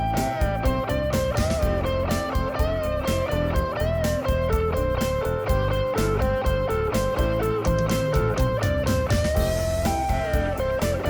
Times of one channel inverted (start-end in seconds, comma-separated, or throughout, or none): none